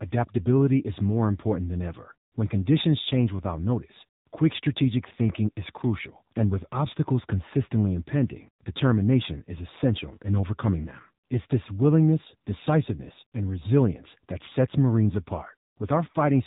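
The speech has passed through the AMR narrowband mobile codec at a low bit rate, consistent with the 7.4 kbps mode, so every 20 ms frame is rebuilt from a sparse vocal-tract model. Throughout, nothing above about 3.8 kHz survives, and the voice sounds plainly buzzy and synthetic.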